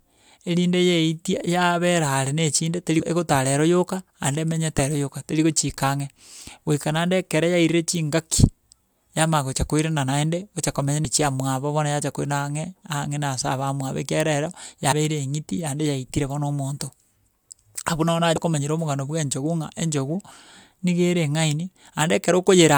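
At 2.99, 4.76, 11.05, 14.91 and 18.35 s, compressed frames are skipped. Missing or rejected frames drop roughly 40 to 100 ms of speech, so the sound leaps ahead. The waveform shows an abrupt envelope jump, and the spectrogram shows a narrow vertical seam.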